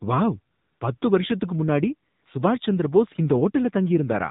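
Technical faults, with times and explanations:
Throughout: AMR narrowband mobile codec, plainly audible; nothing above 4 kHz survives, and the speech sounds buzzy and synthetic, consistent with a low rate around 7.4 kbps.
0.54–0.80 s, 0.98–1.02 s, 2.10–2.26 s: AMR comfort noise; the phone judged these gaps silent, so smooth synthetic noise replaces the real background, switching in and out, the second just before "வருஷத்துக்கு முன்னாடி சுபாஷ் சந்திர", the third between "வருஷத்துக்கு முன்னாடி" and "சுபாஷ் சந்திர போஸ்".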